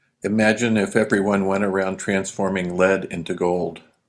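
No technical faults are audible.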